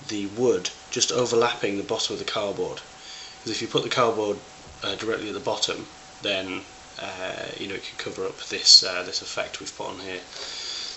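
A short burst of garbled noise pops up at 6.63 to 6.68 s, a corrupt frame decoded: a few damaged compressed frames played anyway, peaking around -30 dBFS.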